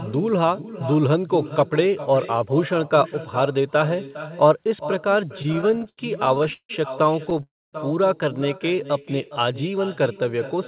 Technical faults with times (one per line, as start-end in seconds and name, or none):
0.00-10.67 echo with no canceller
5.38-6.71 repeated stalls (stutter)
7.25-7.41 repeated stalls (stutter)
7.43-7.75 call audio freeze